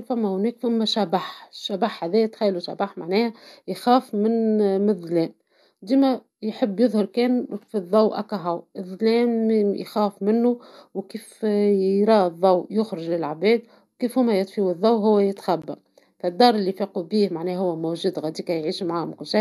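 At 15.62 s, just after "كي هوما يطفيو الضو", the speech cuts out for 16.5 ms: a gap at a join of encoded pieces. Separately encoded segments were joined untrimmed, keeping encoder delay and end padding. The brief silence has smeared edges before speech resumes.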